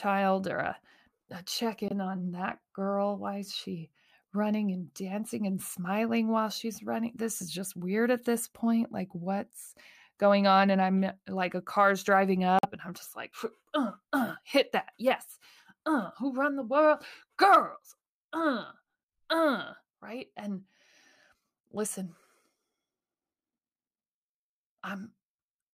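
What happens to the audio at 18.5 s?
Nothing goes wrong at 18.5 s; the speech carries on intact through that moment with no dropout, click or other fault.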